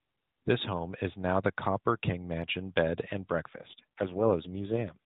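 Around 3.54 s the speech takes an AMR rate drop that lasts until about 4.98 s. The band stays put at the narrowband mobile codec's 4 kHz ceiling, and there's no gap, but the voice suddenly goes rougher and buzzier, more synthetic. That fits the network pushing AMR-NB from 12.2 down to 4.75 kbps, so far fewer bits go to the pulses that drive the vocal-tract model, with the rest spent on error protection for a weak link.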